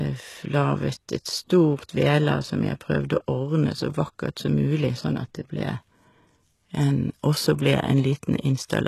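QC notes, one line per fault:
Throughout, HE-AAC compression: s sounds come out gritty and lispy, and the upper harmonics don't line up with the lower ones. This likely comes from treble rebuilt by copying lower bands at about 16 kbps. A spectrogram shows blocky, repeated upper bands and nothing above 12.3 kHz.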